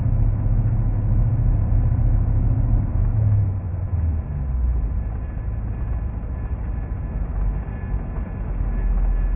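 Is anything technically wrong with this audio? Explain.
Yes. Aliasing runs through the whole clip: the highs of these sounds turn gritty and metallic, with faint wrong tones roughly 35 dB below the signal. Everything above a 3 kHz fold point was mirrored back down, which fits an unfiltered drop to 6 kHz sampling.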